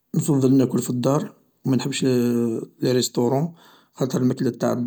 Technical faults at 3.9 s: none

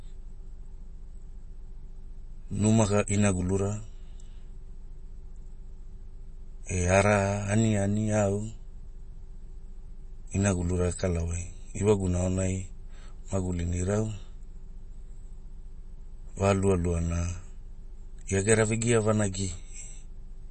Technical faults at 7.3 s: MP3 compression

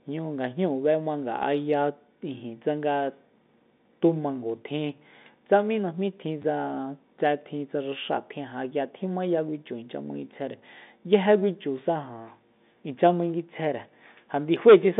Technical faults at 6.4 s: packet loss with last packet repeated

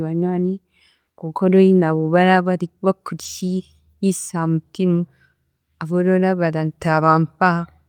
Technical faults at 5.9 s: none

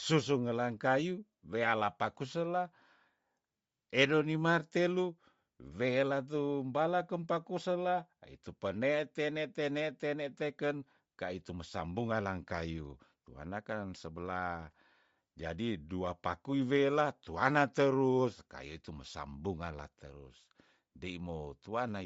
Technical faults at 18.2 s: Bluetooth LC3 compression

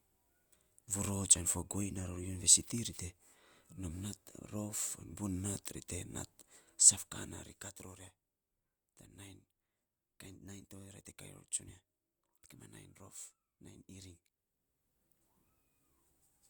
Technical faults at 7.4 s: zipper noise

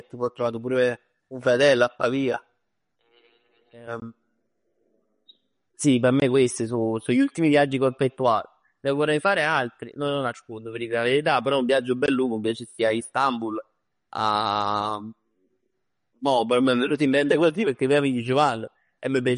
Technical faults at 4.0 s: MP3 compression; block of digital silence

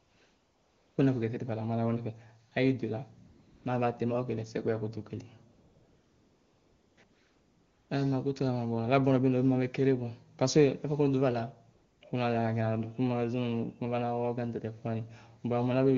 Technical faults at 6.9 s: AMR comfort noise

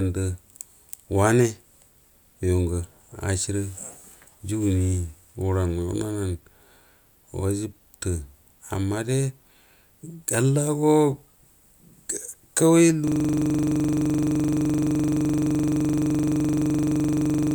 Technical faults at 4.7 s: none

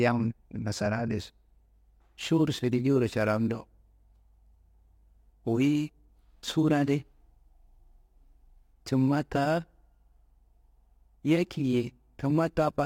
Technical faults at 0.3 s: none

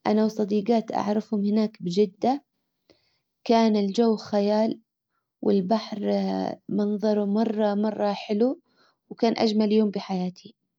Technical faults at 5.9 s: none

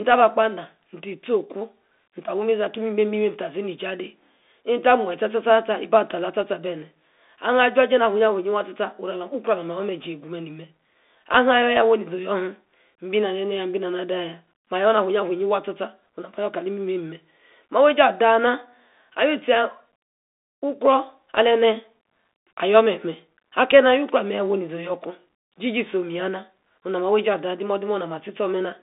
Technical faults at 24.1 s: Bluetooth CVSD headset codec

